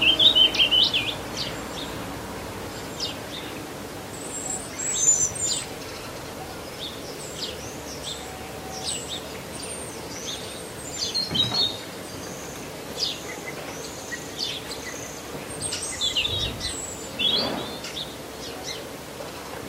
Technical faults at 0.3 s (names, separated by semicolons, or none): none